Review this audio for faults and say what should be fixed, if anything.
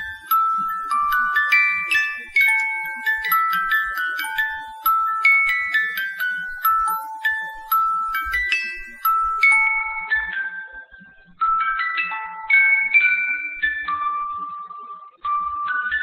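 At 9.67 s the treble suddenly vanishes above 4.5 kHz and artefacts rise until the end. There is no gap. This is an adaptive stream at a lower bitrate, consistent with a drop from about 64 to 12 kbit/s. Prevent it with a steadier connection or a larger playback buffer.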